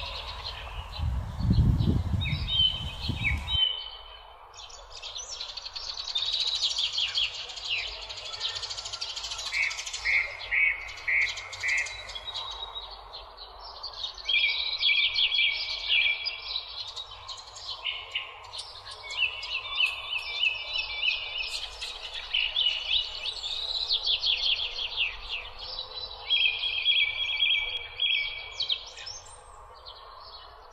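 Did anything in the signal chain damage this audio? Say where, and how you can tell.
Yes. From 18.79 to 27.77 s there is a doubled audio track: a full-band copy trails by roughly 300 ms, about 5 dB down, and starts and stops abruptly. It has no decay tail or room colour, which rules out acoustic echo or reverb. The likely cause is a second, slower capture path or an edit layering two offset copies.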